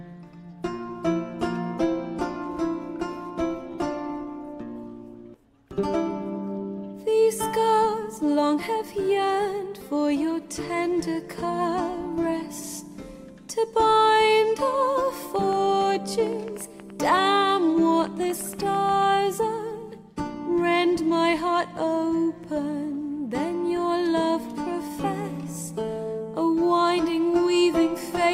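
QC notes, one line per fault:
15.36–19.04 s train of clicks: about 20 pulses, roughly 6 per second, unevenly spaced, peaking slightly above the sound, likely interference; thin vertical spectrogram lines, waveform spikes.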